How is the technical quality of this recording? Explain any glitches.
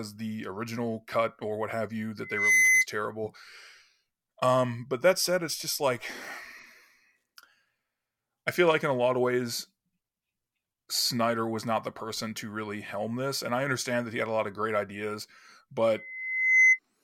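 The recording has loudspeaker feedback squeal twice, from 2.22 to 2.86 s and from 15.93 to 16.79 s. The mic is catching its own speaker and looping at 2 kHz, so a pure tone swells up over a fraction of a second, faster the first time, to about 10 dB above the speech.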